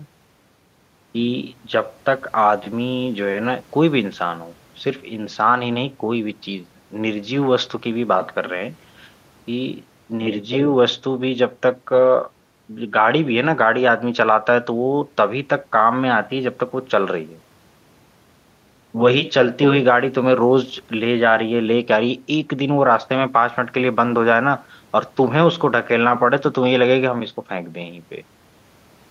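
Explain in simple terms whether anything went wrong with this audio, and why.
Nothing went wrong here.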